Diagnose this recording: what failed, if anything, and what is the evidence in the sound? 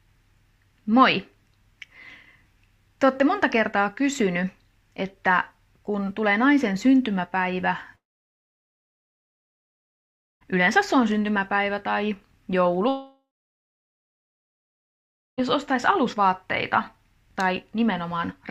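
Two long gaps break the sound, from 7.95 to 10.43 s and from 12.89 to 15.40 s, each about 2.5 s long. At each one the last sound carries on briefly as a fading buzz, then drops to near-silence for about 2.4 s and 2.1 s respectively, and resumes further on with the middle missing. This is likely a long network dropout. On a spectrogram each appears as a short smeared tail followed by a blank vertical band, and on the waveform as a flat line.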